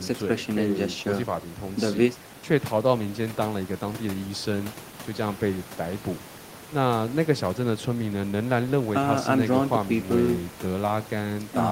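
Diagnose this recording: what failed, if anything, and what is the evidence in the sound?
Nothing failed; only ordinary room noise sits beneath the speech.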